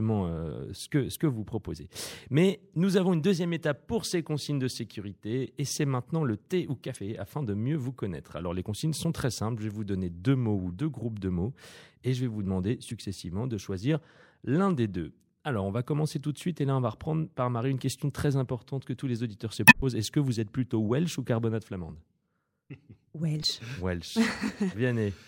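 Damaged data in a compressed stream shows up five times in this speech. At 1.12 s, between "euh ce que" and "que vous proposez", a 40 ms burst of corrupted frames throws the decoder out of sync and produces a short glitch. The same blip recurs at 6.93 s after "maintenant le thé ou", at 12.88 s after "je vais vous demander", and at 23.40 s. The longest, from 19.65 to 19.82 s, garbles while resynchronising and inserts 80 ms of extra time.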